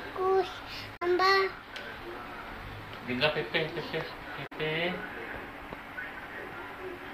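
The audio has damaged data in a compressed stream at 0.93–1.03 s and 4.43–4.53 s. Each event is a brief glitch lasting about 0.1 s. There, corrupted frames confuse the decoder until it resynchronises.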